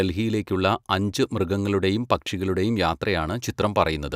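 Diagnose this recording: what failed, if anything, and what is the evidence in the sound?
Nothing failed; no fault is audible in this recording.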